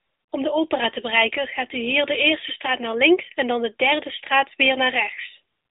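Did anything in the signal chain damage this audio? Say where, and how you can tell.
Yes. The codec stage applies an AMR narrowband mobile codec throughout the speech. Nothing reaches above 3.8 kHz and the band sits near 300 Hz to 3.7 kHz, consistent with 8 kHz sampling. Its plainly audible buzzy, synthetic texture fits the 10.2 kbps mode.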